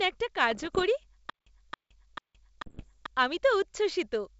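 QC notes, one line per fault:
0.51–0.84 s and 2.66–2.89 s, bit errors on an ADPCM link: pops and rough, gritty bursts with brief level jumps. Each flipped bit throws off the decoder's step size and predictor, so the damage rings on for milliseconds. The second burst is denser, around twice the error rate.
1.30–3.06 s, stutter with silent gaps: a 0.27 s fragment repeats four times at an even 0.44 s period, with 0.17 s of dead digital silence between repeats. The likely cause is a stalled stream replaying its last buffer and then running empty. The audio due in that span is lost.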